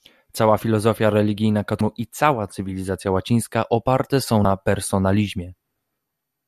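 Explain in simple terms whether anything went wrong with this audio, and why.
Two brief glitches in this speech, at 1.78 s and 4.42 s, each lasting about 30 ms, come from damaged data in a compressed stream. A bit of the file got corrupted, so the decoder misread those frames and briefly lost its place, giving a quick chirp or blip.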